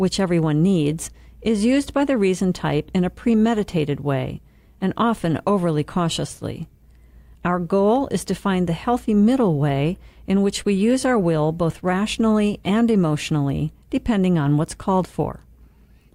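Nothing stood out as a technical problem on listening to this speech recording.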